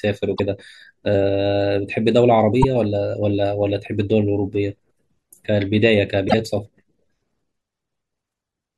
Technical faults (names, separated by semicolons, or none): damaged data in a compressed stream